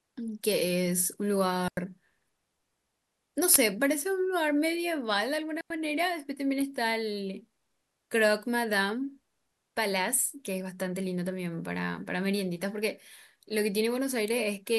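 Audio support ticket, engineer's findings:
Digital wireless dropout, two events: 1.68–1.77 s and 5.61–5.70 s. RF link losing too much data; receiver mutes rather than play corrupt audio. Result: clean holes of near silence, about 91 ms and 94 ms, very short fade in and out, no noise burst either side. Probable component: wireless transmitter/receiver path. Suspect range, antenna placement or interference. Check RF levels and diversity at receiver.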